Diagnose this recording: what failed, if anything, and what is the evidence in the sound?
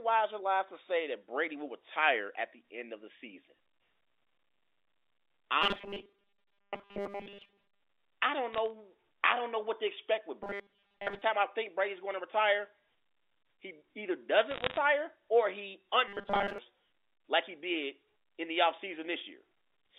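Driver or buffer stage: robotic sound from repeated short buffers at 5.62–7.80 s (before "I don't"), 10.43–11.22 s and 16.08–16.58 s (after "or he"). A steady 200 Hz buzz, likely from 5 ms buffers being replayed, unlike clean dropout gaps.

Network or line stage: bit errors on a digital phone line at 8.53–8.70 s, between "I don't" and "I don't know what", and at 14.51–14.77 s. Sharp ticks from flipped samples, with no muting or buzz.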